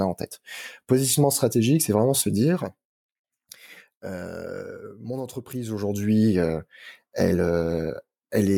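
Zipper noise from 5.58 to 6.2 s, after "euh mon": a level shift of about 10 dB moves in unsmoothed steps, around two hundred a second, leaving a fine ticking buzz.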